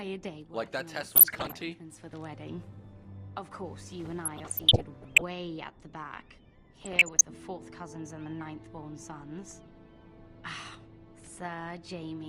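At 1.15 to 1.54 s, again from 4.25 to 5.22 s, and once more at 6.73 to 7.21 s you get DAB burbling. Weak reception let bit errors, somewhere under one percent, slip past the error correction into the MP2 stream. Corrupted samples then put short blips of noise into individual sub-bands, and corrupted scale factors make sub-bands leap in level for up to a frame, so the sound burbles. The middle stretch runs longest, close to a full second.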